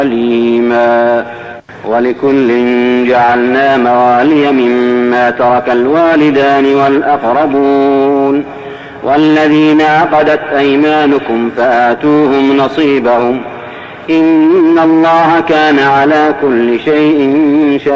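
At 3.26 s and again at 13.26 s there is short concealed packet loss: about 20 ms of audio failed to arrive, and the receiver filled each gap by extending the preceding sound before blending back, producing a brief smear or wobble, heard through the G.722 call path's 8 kHz bandwidth limit.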